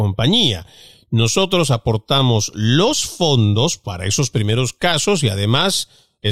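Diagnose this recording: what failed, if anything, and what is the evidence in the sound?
Nothing failed; the recording carries no audible evidence of a fault at any stage.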